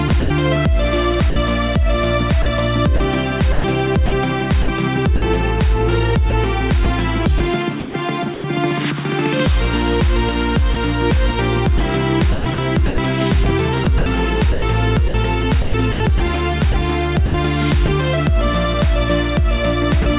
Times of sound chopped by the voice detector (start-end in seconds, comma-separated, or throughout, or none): 0.08-0.30, 2.42-5.22, 6.30-8.44, 11.78-17.88